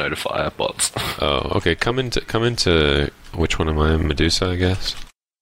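From 1.68 s to 4.45 s a mains buzz sits under the sound, about 35 dB below it. It is built on 60 Hz mains: sharp switching spikes, such as those from a dimmer, a rectifier or an unshielded cable, get into the path twice per mains cycle. That puts a dense series of 60 Hz harmonics up into the kilohertz range, heard as a steady, raspy buzz.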